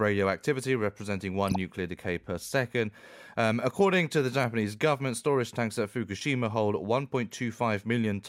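Corrupt frame decoded at 1.48 to 1.56 s, 4.71 to 4.75 s and 7.31 s: damaged compressed frames were decoded anyway, so misread codes put energy at wrong frequencies for a few frames each. The result is brief chirpy bursts over the speech, loud at first, then fainter.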